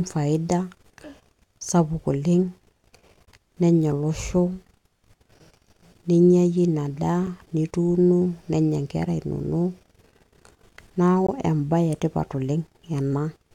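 Speech, interrupted by a gap between stream segments at 3.25–3.27 s, 7.27 s and 11.27–11.29 s, roughly every 4 s. Segment timestamps leave small holes, about 20, 6 and 19 ms, that the player fills with hard-edged silence. The sound pauses but none is lost.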